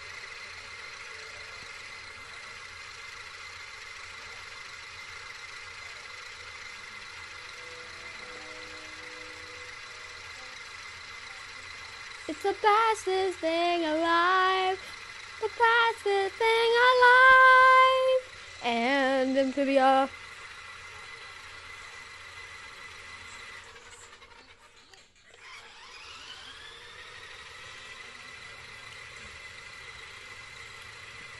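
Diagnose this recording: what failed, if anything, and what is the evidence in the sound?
Nothing failed; no fault can be heard anywhere.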